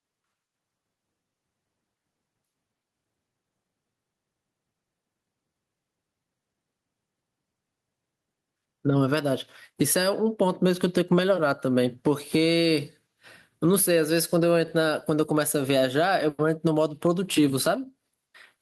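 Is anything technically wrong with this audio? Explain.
Yes, there is gain pumping throughout this speech. The input gain was likely set far too high, with a fast limiter or compressor clamping down on each loud syllable. The gain swings by about 10 dB, leaving the speech squashed and flat in level.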